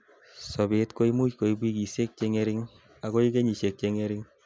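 No technical faults can be heard in this speech recording, so there is nothing to describe in time order.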